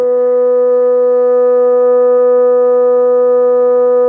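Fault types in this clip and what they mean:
No faults in the music; the top end stops at 8 kHz, as expected from the call's microphone processing and the Opus call codec.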